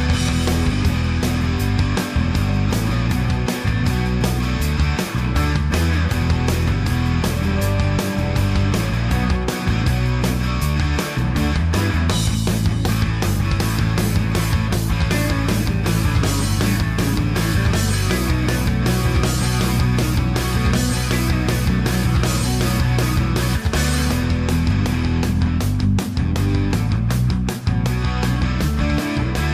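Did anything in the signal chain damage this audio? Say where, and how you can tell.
No, nothing in the signal chain stood out as damaging this audio when I listened to it.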